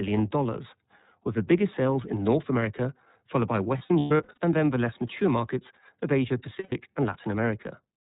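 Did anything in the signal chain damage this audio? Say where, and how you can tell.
Yes. The codec stage shapes the whole clip: this is iLBC speech, with nothing above 4 kHz. The rough, slightly synthetic edge is plainly audible throughout. The texture fits the 13.33 kbps mode with 30 ms frames. Each frame's excitation is coded on its own, without leaning on the frame before.

On the network side there are lost iLBC frames. Between 3.78 and 4.38 s about 330 ms went missing, scattered over roughly 600 ms, and the longest run was around a tenth of a second. From 6.59 to 6.73 s another 120 ms drops out. In each gap the decoder loops the last pitch cycle with some noise, giving a held, breathy vowel. Because the frames stand alone, the voice snaps back right afterwards.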